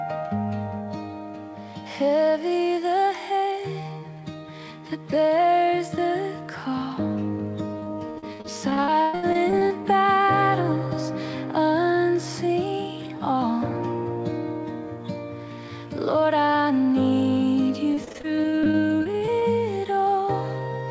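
From 7.80 to 9.86 s, repeated packet loss makes the sound choppy and robotic. Holes up to 116 ms are patched by stretching earlier sound. It returns from 17.94 to 19.43 s, with shorter, denser gaps.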